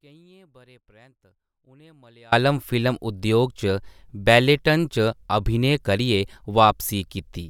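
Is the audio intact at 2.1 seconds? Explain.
No. At 2.1 seconds the speech is still inside an audio dropout to a faint residue, already under way when the clip begins and lasting until 2.32 s. The wanted signal is likely lost upstream while the path after the break stays live, so only a faint leak remains, about 30 dB below normal. Unlike a pause or fade, the speech returns abruptly at full level rather than easing in.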